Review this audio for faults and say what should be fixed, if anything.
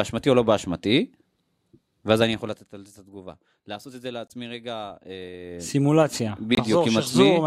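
Corrupt frame muted, at 4.28 to 4.32 s and again at 6.55 to 6.59 s. Each is a sudden hole of about 40 ms, which fits a few compressed frames whose bits were damaged, rejected by the decoder, and replaced with silence while timing carried on. Preventing it calls for error protection or retransmission on the transport, and concealment in the decoder instead of plain muting.

Zipper noise, from 5.40 to 5.76 s. A level change of about 15 dB arrives in 1 dB steps at around 40 per second, and each unsmoothed jump puts a small click in the speech, giving a ticking texture while the gain moves. Interpolating the gain per sample, or ramping it across each buffer, would remove the steps.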